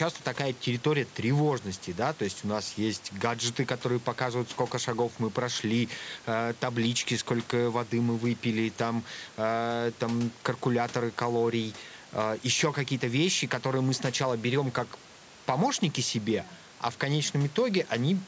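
Nothing goes wrong in this speech recording: the call's microphone processing trims the lowest bass and leaves nothing above 8 kHz, as it normally would, and a bit of room noise sits quietly in the background, about 25 dB below the speech.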